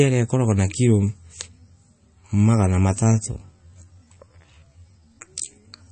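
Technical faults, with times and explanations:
Throughout, MP3 compression: watery, swirly sound with nothing above 8.3 kHz, likely from heavy MP3 encoding at a low bitrate around 32 kbps dropping treble and weak detail.
2.92 to 5.91 s, time-stretched section: speech abruptly slows to about 0.65 times speed at unchanged pitch and drags, likely from stretching that repeats short pieces.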